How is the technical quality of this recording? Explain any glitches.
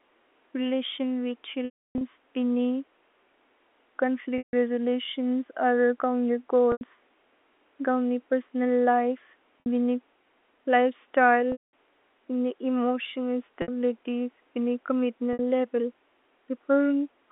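The one real problem is packet loss with pitch repetition, at 1.65, 4.38, 6.72, 9.60, 11.52, 13.62 and 15.33 s. When audio drops out, the receiver keeps looping the last pitch cycle. The 60 to 90 ms gaps come across as a brief buzzy hold. The longer ones, 150 ms, 210 ms and the roughly 300 ms run near 1.7 s, fade to silence before the speech cross-fades back in. The band is narrowed by the telephone-line coding.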